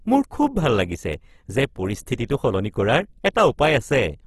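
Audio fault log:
Throughout, Opus compression: the speech sounds grainy and rough, with a noisy texture and nothing above 12.2 kHz. This is likely low-rate Opus coding in its music-style mode. It keeps each band's overall energy but, short of bits, fills the detail with folded copies of lower bands or noise, so the tone coarsens instead of swirling. The damage is plainly audible and points to a bitrate around 16 kbps.
0.43 to 3.97 s, word clock ticks: sharp clicks recur at a steady pace of roughly one every 0.7 s, about seven in all, some stronger than others. The regular spacing points to a digital link read on a free-running clock not locked to the sender's. Each time the two clocks slip past each other, a single sample is dropped or repeated, leaving a tick. The rate fits a clock mismatch of around 30 parts per million.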